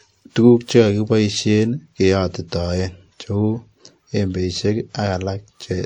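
From start to finish the speech carries two overlapping sets of compression artefacts, the mark of transcoding between lossy codecs. The smeared, watery texture of a low-rate MP3 stage sits under a WMA encoder's own coding noise, with nothing above 18.6 kHz. The cause is likely an MP3 encode around 50 kbit/s re-encoded to WMA at about 64 kbit/s.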